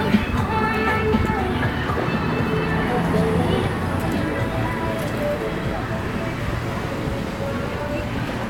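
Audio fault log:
Nothing to flag here: these sounds come through without any technical problems worth noting.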